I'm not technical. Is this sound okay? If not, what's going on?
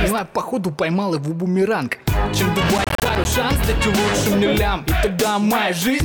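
No, there's a problem from about 2.78 to 3.25 seconds: a short burst of crackly, gritty tearing over the sound. That's processor overload crackle. The computer got too busy to prepare each small chunk of audio in time, with each chunk around 10 milliseconds long. Roughly fifteen deadlines were missed in that half second, and each miss became a tiny hard-edged gap of silence. Strung together, those gaps sound like crackle until the load eases.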